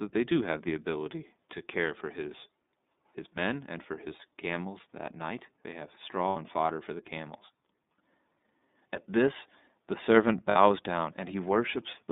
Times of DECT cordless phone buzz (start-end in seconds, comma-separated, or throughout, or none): none